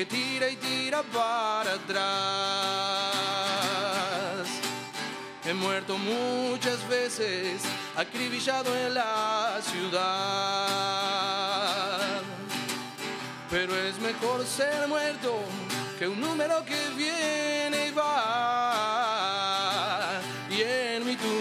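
Nothing in this audio trips up at any point, so there's simply no technical fault to point to anywhere along the way.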